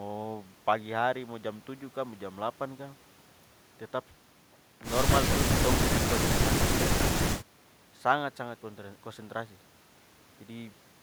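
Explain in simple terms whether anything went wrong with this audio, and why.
Listening carefully to this speech recording, nothing stood out as having gone wrong.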